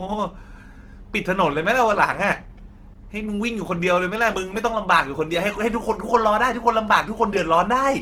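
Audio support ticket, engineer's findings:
Opus compression, throughout the speech. Grainy, rough texture on voiced sounds, plainly audible; bandwidth stays full, up to about 20.2 kHz. Likely an Opus encoder in CELT music mode near 16 kbps, noise-filling and folding starved bands instead of leaving holes.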